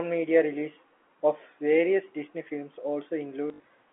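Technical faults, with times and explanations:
3.48–3.64 s, packet loss with last packet repeated: about 100 ms of audio went missing in gaps scattered across 160 ms, the longest run lasting 60 ms, which fits 20 ms packets. The receiver filled each hole by replaying the previous packet. Those copies seldom line up with the pitch, and the 60 ms run buzzes at roughly 50 Hz. The result is a brief robotic stutter over the telephone-band G.711 audio.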